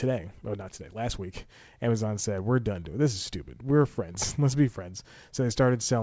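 The clip is speech, and nothing is technically wrong with it; the sound stops at 8 kHz, which fits a G.722 call path.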